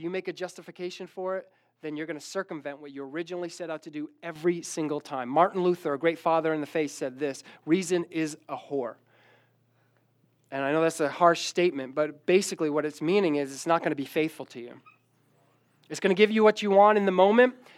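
Sudden gain jump at 4.36 s, right after "set out to do": the speech and background noise both rise about 8 dB and stay louder, likely from gain applied without a ramp.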